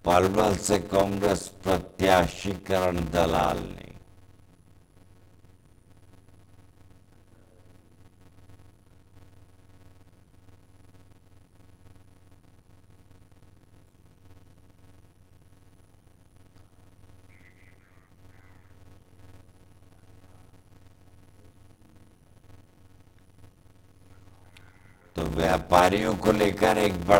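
Throughout, a block size mismatch (padded) zero-fills each block, producing a 91.9 Hz buzz and 0.533× speed at normal pitch, fitting 256-sample writes into 480-sample reads; waveforms show regular silent gaps.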